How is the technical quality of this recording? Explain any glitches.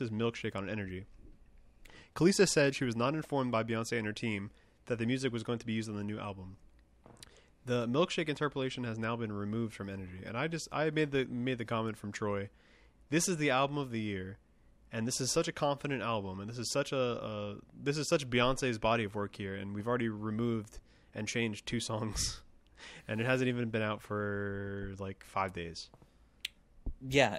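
The recording has one continuous glitch: faint, regular ticks run through the speech from 0.27 s to 27.33 s, about five per second, around a hundred in all. These are clock slip clicks, likely from two devices on unsynchronised clocks differing by roughly 100 ppm, so a single sample is dropped or repeated about every 0.2 s.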